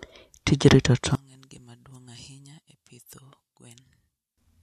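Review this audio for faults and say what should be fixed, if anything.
One channel inverted, from 1.15 to 4.38 s: the speech drops by about 31 dB and leaves only a faint remnant. The likely cause is reversed polarity on one stereo channel, so the shared centred speech cancels when both channels are summed to mono. To prevent it, check polarity on each channel and listen to the mix in mono before delivery.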